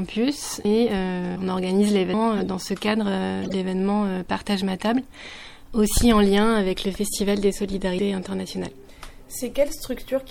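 The whole recording has likely passed through MP3 compression at a low bitrate, which fits something around 64 kbps. Short of bits, the encoder trims the treble at a fixed cut-off and drops weak frequency lines that flicker in and out between frames, so the sound comes across plainly watery and swirly, with smeared attacks and a metallic edge on bright, hissy content. At 0.65 s the program likely failed to read its input in time, a dropped buffer (overrun), and the hardware overwrote roughly a fifth of a second of audio. The surviving pieces are butted together with no gap, so there is an abrupt jump forward in the sound. A second, shorter overrun at 7.99 s loses about a tenth of a second and produces the same skip. Between those, the decoder played damaged compressed data as if it were valid, a corrupt frame decoded. From 2.37 to 2.43 s and again from 3.42 to 3.53 s, a handful of frames each carry wrong gains or misread codes, putting energy at frequencies where it doesn't belong. 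Each event is heard as a brief chirpy, noisy burst peaking around -20 dBFS, lasting only as long as the damaged frames.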